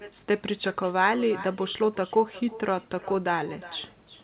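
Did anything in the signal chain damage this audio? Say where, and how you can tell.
Yes. Echo with no canceller runs throughout: every phrase returns about 18 dB quieter roughly 400 ms later, because the far-end loudspeaker's output re-entered its microphone uncancelled.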